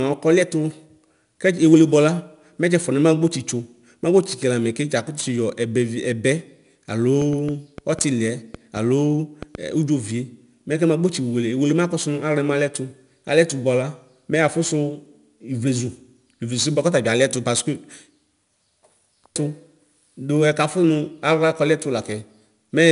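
Throughout the speech, 4-bit ADPCM compression leaves a gritty hiss that rises and falls with the talker's level, and consonant onsets sound roughened where the adaptive step cannot keep pace. The damage is plainly audible. Nothing reaches above 10.6 kHz, which fits a sample rate near 22 kHz and a data rate around 89 kbps. On a spectrogram, a fine noise haze fills the gaps between harmonics during loud passages and ends at a hard ceiling at 10.6 kHz.

From 7.22 to 9.56 s a train of clicks ticks over the audio, about ten in all at roughly 3.43 per second with uneven spacing. The pops are alike in shape and peak a little above the speech level, so they stand out even where the voice is present. The likely cause is interference or a faulty connection injecting pulses. A waveform shows them as thin, near-identical spikes, and a spectrogram shows full-height vertical lines at irregular intervals.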